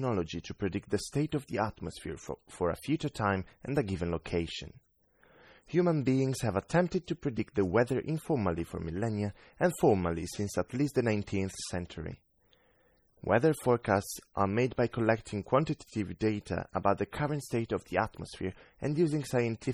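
MP3 compression damage runs through the whole speech clip. It was likely caused by encoding at a very low bitrate, consistent with about 32 kbps. Starved of bits, the encoder cuts the treble and drops weak frequency lines frame to frame, leaving a heavily watery, swirly sound with metallic chirping on s sounds and smeared attacks.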